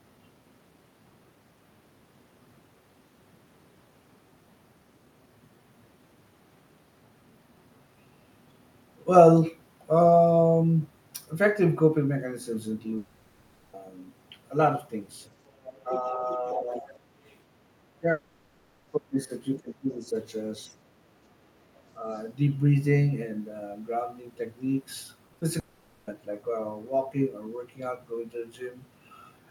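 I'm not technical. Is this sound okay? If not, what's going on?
No. There are four kinds of problems in this speech recording.

Long network dropout at 12.97 to 13.75 s, 18.11 to 18.89 s and 25.59 to 26.09 s. The first two last about three quarters of a second and the last about half a second. Instead of the voice, you hear the last sound smeared on as a fading buzz or hiss. When the voice returns, that stretch of speech is simply gone. This is likely the connection stalling, so no audio reached the listener and the receiving phone filled the hole as best it could.

Other side's voice leaking through from 15.47 to 17.35 s, then in brief scraps at 19.56 to 19.60 s and 22.13 to 22.19 s. A second, fainter voice sits underneath the main one. The long stretch is quiet but noticeable, and the later scraps are very faint. This is likely the other person's voice coming out of the speaker's loudspeaker and being picked up again by the microphone, because the echo-removal feature didn't catch all of it.

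Speech suppressed in double talk at 15.84 to 16.23 s, 16.56 to 16.85 s, 17.95 to 20.15 s and 20.68 to 20.77 s. The main voice briefly dips in volume or drops out in pieces. The first two dips are slight, the one at 20.68 s is more noticeable, and from 17.95 to 20.15 s the voice is pushed down sharply in places. This likely happened because both people talked at once, and the echo-removal feature couldn't tell the voices apart, so it turned everything down.

Short concealed packet loss between 25.27 and 25.43 s, in three tiny bursts of a few hundredths of a second each. These come just before the last dropout. They sound like a quick smear or wobble in the voice. Small pieces of the call arrived too late, so the phone patched each gap by briefly stretching the sound just before it and then blending back in.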